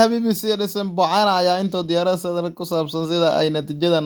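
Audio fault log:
No fault is logged for this speech clip.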